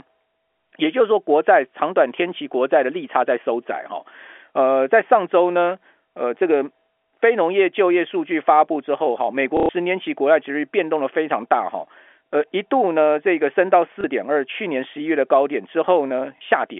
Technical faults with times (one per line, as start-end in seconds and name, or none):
9.57-9.69 packet loss with last packet repeated
14.01-14.04 packet loss with last packet repeated
16.38-16.41 packet loss with last packet repeated